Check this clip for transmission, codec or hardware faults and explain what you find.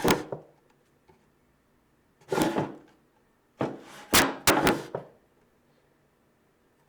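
Violent, sharp cracks break through the loudest moments, far harsher than ordinary clipping. This is integer overflow: a short burst at 0.08 to 0.11 s, with peaks driven about 5 dB past the limit; a single crack at 2.42 s, right at the limit; and a long stretch from 4.14 to 4.69 s, about 17 dB over. Instead of being held at the maximum, each over-range peak wrapped around to the opposite sign, swinging across the full range and producing those snaps.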